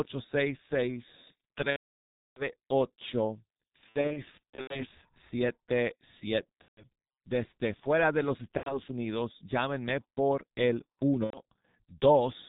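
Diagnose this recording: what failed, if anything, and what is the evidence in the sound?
Codec stage: heavy G.723.1 codec damage throughout. The sound is muffled, with nothing above 4 kHz, and it's hoarse with smeared consonants, which fits the 6.3 kbit/s mode.

Network stage: VoIP packet loss concealed by the speech codec at 1.70–2.47 s, 3.89–4.85 s (scattered gaps), 6.62–6.85 s, 8.57–8.82 s after "fuera de los" and 11.24–11.41 s after "llámenme por el". The decoder extrapolates into a buzzy tone or a coloured noise that fades.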